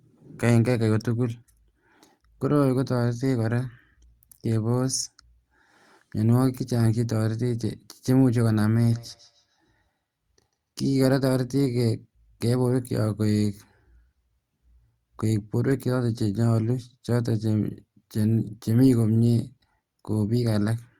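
From 8.92 to 10.57 s, feedback echo between two devices sends faint copies back roughly every 150 ms, about 31 dB down, visible as evenly spaced ghost onsets.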